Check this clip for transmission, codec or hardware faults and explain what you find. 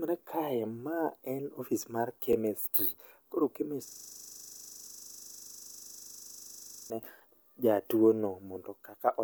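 Two faults turn up in this speech clip. One is a brief overlap at a chunk join. The other is a long system hang loop.

Overlapping chunks occur from 2.33 to 2.35 s, right after "ma en office mar". Here the next chunk starts before the last one has finished. About 23 ms of audio plays twice at the join. The chunks look to be about 2.5 s long. The doubled slice breaks the flow of the speech, and it is heard as a short click or stutter.

A system hang loop runs from 3.88 to 6.9 s. The host or driver froze, but the sound hardware kept reading its ring buffer. The same 40 ms piece of audio repeats exactly, 75 times. That gives a loop rate of 25 Hz. The speech stops and turns into a rough, mechanical 25 Hz stutter, close to a buzz, for about three seconds.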